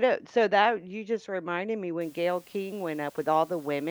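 Speech, where from 2.01 s, after "you just reminded me", low bit depth with dither at 8 bits adds a steady, even hiss about 30 dB below the speech; a spectrogram shows a flat broadband noise floor.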